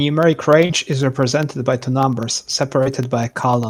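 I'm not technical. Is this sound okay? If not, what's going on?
No. From about 0.13 s to the end, something on the computer side, such as a USB connection or audio driver, keeps getting briefly interrupted every 0.1 s, about ten times a second. Each time, a tiny slice of the speech is dropped and replaced with silence. These periodic USB or driver dropouts come through as a steady run of small ticks or clicks laid over the talking, and you hear them only while there is sound to break up.

Separately, there are two moments of short concealed packet loss, the kind of gap that happens on an internet call. Around 0.65 to 0.71 s, about 40 ms of audio never arrived in time, and again around 2.83 to 2.88 s, about 20 ms went missing. The receiving end covered each gap by stretching out the sound just before it, so instead of silence you get a brief smear or wobble, and a quick sound there may be lost.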